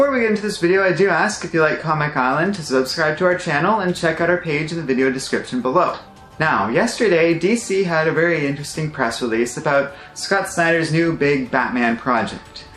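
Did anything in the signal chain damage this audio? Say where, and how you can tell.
No, nothing in the signal chain stood out as damaging this audio on listening.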